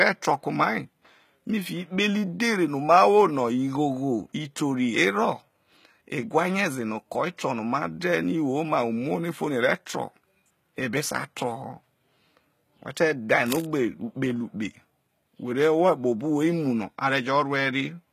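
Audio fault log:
throughout: HE-AAC compression. Codec damage is plainly audible and nothing is present above 14.9 kHz. The likely cause is HE-AAC, fitting a bitrate near 20 kbps, which codes only the lower spectrum and rebuilds the treble by copying lower bands upward, so the upper harmonics do not line up with the original.
13.46–13.66 s: cable scratch noise, just after "who te dhae". A dense, uneven burst of scratching sits over the speech for about 0.19 s, at roughly 10 dB below the signal. The likely cause is a worn cable, connector or control carrying DC being moved, making its contact resistance change rapidly.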